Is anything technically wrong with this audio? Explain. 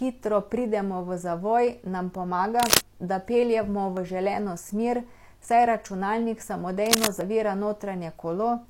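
Yes. The speech has two kinds of fault.

Cable scratch noise appears from 2.56 to 2.87 s and again from 6.86 to 7.08 s. Dense, uneven bursts of scratching sit over the speech, roughly 5 dB above it. The likely cause is a worn cable, connector or control being moved, so its contact resistance changes rapidly.

A dropped buffer (overrun) occurs at 3.97, 5.48 and 7.21 s. Each time the speech jumps ahead with no gap. The first two skips are around 20 ms and the last around 40 ms. This is likely software failing to collect samples before the hardware overwrote them.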